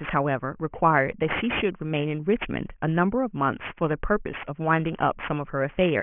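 Aliasing runs through the whole clip. The speech was downsampled without an anti-alias filter, so energy above 3 kHz folds back below that edge, which fits a drop from 24 kHz to 6 kHz. Sibilants turn gritty and metallic, with the folded energy roughly 15 dB under the speech.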